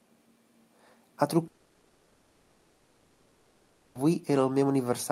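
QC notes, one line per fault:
1.47–4.01 s, long network dropout. The speech stops and is replaced by a stretched copy of the last sound. It turns into a fading buzz, then a low steady noise, with no true silence. This fill lasts about 2.5 s. None of the real audio from that span returns. Speech resumes at 4.01 s with the lost part gone and a tiny skip of about 8 ms. The likely cause is a long gap in arriving packets, covered by concealment.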